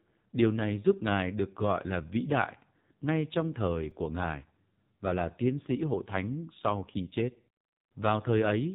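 From the first moment the speech sounds thin, buzzy and synthetic, as if heard over an old mobile call, with nothing above about 3.8 kHz. This is the AMR narrowband mobile codec under heavy strain. It squeezes the voice into a simple vocal-tract model driven by a few pulses per frame, and the coarse, mechanical buzz points to one of its lowest modes, around 5.9 kbps. The missing high band takes the air and crispness out of consonants.

At 3.91 s, just after "đại ngay trong thời", a brief click-like buzz cuts into the speech. This is a repeated buffer: fresh audio was late, so the player replayed its last chunk two more times, with a hard join at each repeat. The repeats are so short that they fuse into a tick rather than an audible stutter, which fits a buffer of about 5 ms. Roughly 10 ms of real audio is lost.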